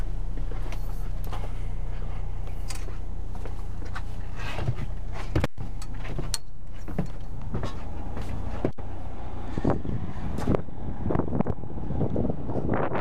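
Intermittent contact at 5.40 to 5.59 s: a loose connection briefly opens for about 121 ms, cutting the sound out, with crackle at the break and reconnection.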